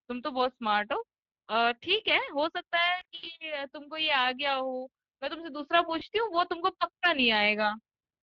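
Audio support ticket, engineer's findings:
Speex codec damage, whole clip: hoarse, noisy speech with a thin, noise-filled top band. CELP excitation starved at a Speex setting near 21 kbps. Steady throughout, unlike loss events, so not network-related.

VoIP packet loss concealed by the speech codec, 2.99–3.28 s: several short gaps across about 240 ms, longest near 80 ms, heard as stretched, fading sound, then weak or distorted speech recovering. Decoder extrapolation, not silent dropouts.

Same fault at 5.99 s: a single brief smear. Recovery is gradual rather than a clean cut.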